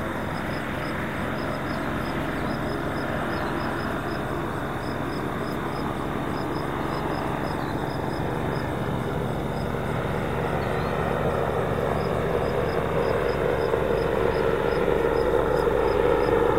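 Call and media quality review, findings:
Brief noisy smear where the sound briefly goes grainy and unfocused at 0.33–0.35 s, 7.79–7.82 s and 11.26–11.29 s. Lost LE Audio frames: the LC3 decoder refills each gap with the last spectrum using random signs. The 20 ms and 30 ms gaps fit two and three 10 ms frames.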